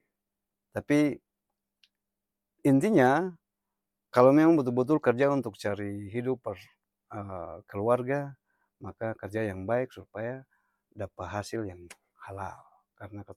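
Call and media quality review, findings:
Bluetooth LC3 compression, throughout the speech: plainly audible breathy, grainy edge on the upper band. Likely the LC3 codec, which fits roughly 48 kbps with 10 ms frames, zeroing high spectrum and noise-filling it. Spectrogram shows speckled, flat-textured upper band in 10 ms blocks.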